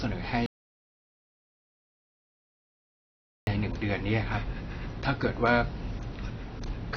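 Speech runs through the whole clip with audible AAC compression. Nothing survives above 6.6 kHz, and the band below is smeared and warbly. That swirling texture separates it from a simple low-pass filter, and the damage fits AAC-LC at about 24 kbps, likely the cause here. From 0.46 s to 3.47 s there is an audio dropout to silence lasting about 3 s, likely from lost input. The gap is silent with no room tone, unlike a fade or noise gate, and whatever was said in it is gone.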